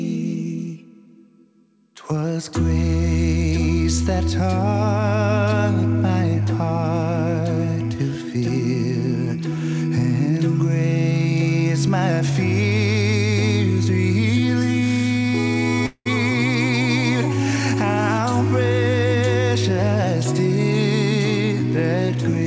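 At 15.86 s the sound breaks off. In its place comes a buzzy, hissing continuation of the last moment that fades over about 195 ms and ends in roughly 60 ms of silence. At 16.07 s the sound resumes, with about 200 ms of material missing. This is likely a long network dropout, with the receiver concealing the gap. On a spectrogram the concealment looks like a smeared, decaying band that ends in a blank column. The waveform shows a shrinking envelope and then a flat line. Throughout the clip, the call path's G.722 coding leaves no content above 8 kHz.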